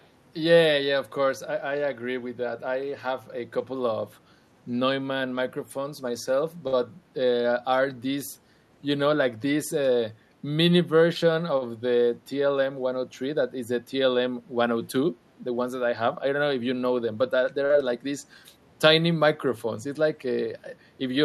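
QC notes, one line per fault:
0.00–0.07 s, echo leak: a very faint copy of the sound trails about 333 ms behind, far below the main level. This is likely a loudspeaker at the far end whose echo canceller let a remnant of its microphone pickup through and back down the line.
6.67–6.76 s and 11.58–11.68 s, short stall from a late packet: a sound is held slightly too long, by about 53 ms and then about 38 ms, with a slight buzz or dip. A packet arrived late, the jitter buffer emptied, and the last sound was stretched until playback resumed where it left off, so nothing is lost.
17.65–17.73 s, short concealed packet loss: a brief smear or wobble of about 43 ms. Around 40 ms of audio never arrived in time, so the receiver extended the preceding sound to bridge the gap before blending back into the real signal.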